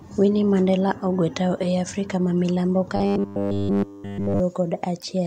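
Playback likely ran short of new audio from 2.96 to 4.40 s and looped one short buffer throughout, giving robotic sound: a rigid 100 Hz buzz.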